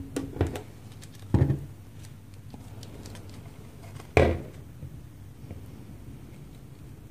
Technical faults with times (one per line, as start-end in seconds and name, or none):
none